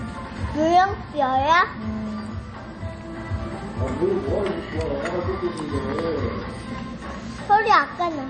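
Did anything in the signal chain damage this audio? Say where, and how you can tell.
Yes. Throughout the clip the sound has a watery, swirling quality, with metallic chirps on bright transients, and nothing at all is present above 9 kHz, a hard ceiling rather than a gradual roll-off. This points to the codec stage, most likely MP3 compression at a low bitrate in the region of 32 kbps: starved of bits, the encoder cut the treble and zeroed weak frequency lines that flicker on and off frame to frame.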